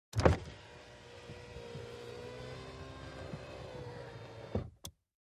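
No technical faults occur at any point, so there is nothing to describe in time order.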